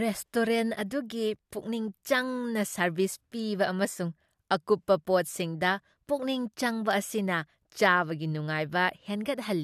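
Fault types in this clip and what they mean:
No faults found in the speech audio; nothing to flag.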